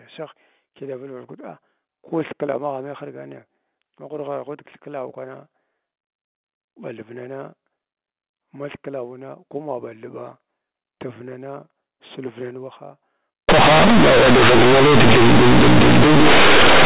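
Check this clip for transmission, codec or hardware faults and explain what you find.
One fault appears, in the last part of the clip. From 13.49 s to the end at 16.86 s, just after "silvnan waha", the speech shows companded audio read as linear. The G.711 mu-law bytes were played as plain linear 8-bit samples without expansion. Because mu-law packs sign and a logarithmic level into each byte, every sign change now swings the output across about half its range, so soft and loud parts come out equally huge. The result is very loud, buzzy, badly bent speech with strong noise filling the pauses. Before this, the telephone-band G.711 coding at 8,000 samples per second is heard as intended, with nothing above 4 kHz.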